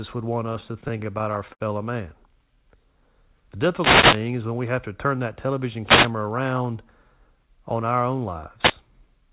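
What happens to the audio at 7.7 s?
At 7.7 s the speech comes through intact, with no dropout, glitch or distortion, only the narrowband call-path sound with nothing above 4 kHz that fits G.711 A-law telephone coding.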